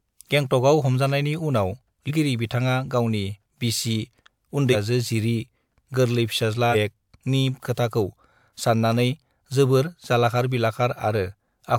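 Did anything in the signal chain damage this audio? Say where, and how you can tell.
Yes. Compressed frames were skipped at the codec or storage stage: whole blocks of encoded audio never reached the output, either missing from the file or rejected by the decoder. At 2.07 s the speech jumps ahead by about 150 ms, and at 4.72 s and 6.71 s by about 300 ms each. The gaps fit whole multiples of a 46.4 ms frame.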